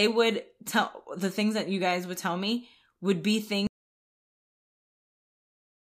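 At 3.67 s the speech stops abruptly and the rest of the clip, about 2.2 s, is an audio dropout to silence that never recovers. The gap is silent with no room tone or hiss, which sets it apart from a noise gate or a natural pause, where some background remains, and from a fade-out, which tapers. The likely cause is a lost input, such as a disconnected device or an unintended mute, while recording continued.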